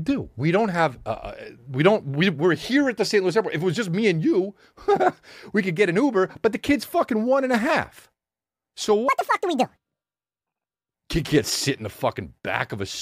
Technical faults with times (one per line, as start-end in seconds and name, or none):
9.09-10.94 section at the wrong speed